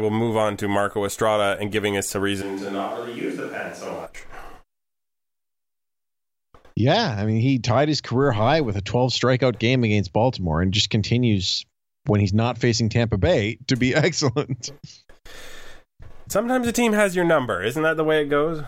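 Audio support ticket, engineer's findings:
Likely switch to a distant microphone, 2.43–4.05 s after "and giving us a": close mic dropped out, farther pickup used. Speech turns roomy, hollow, thin; level about 5 dB lower, room noise more audible. Abrupt change both ways.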